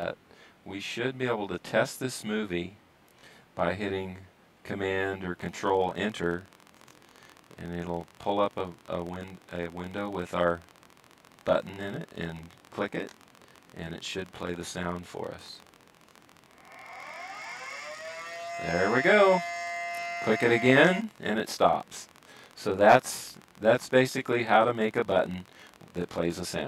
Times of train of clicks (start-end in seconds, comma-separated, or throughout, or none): 5.39-26.60